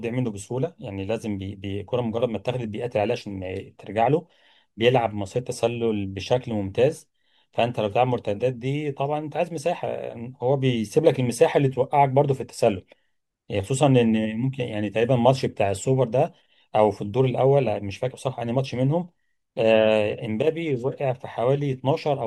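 Nothing in the speech stood out as a technical problem on listening.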